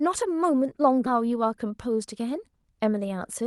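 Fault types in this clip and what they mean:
Skip ahead: The jitter buffer had more speech queued than it needed, so it threw away about half a second of audio and caught up to the newer packets. At 1.07 s the speech jumps straight forward with no silence or fill, and the two sides are butted together so that a chunk of the utterance simply vanishes. Around the jump, the call codec's coding noise and a top end that stops near 12 kHz are audible.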